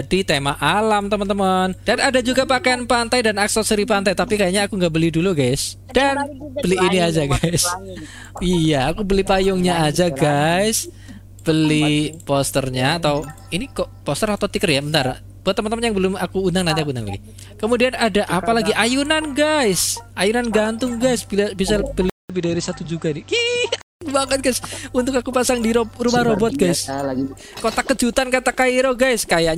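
At 22.10 s the sound drops out for 200 ms. It then returns dull and narrower, with nothing above 8.2 kHz. A faint new background noise sits about 30 dB down. Loudness barely changes. This lasts until 24.01 s. The likely cause is an input switched to a poorer device.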